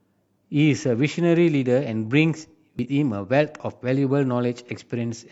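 At 2.79 to 2.86 s, damaged data in the compressed stream makes the decoder misread frames and lose sync, producing a brief glitch in the speech.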